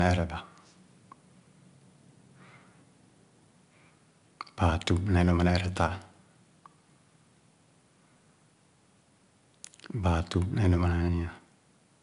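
From start to finish the speech carries 4-bit ADPCM compression: each sample is coded as a coarse step off a prediction, so a gritty hiss rides on every loud syllable and sharp onsets crunch. Nothing sits above 10.6 kHz, which fits a reduced-rate stream around 89 kbps.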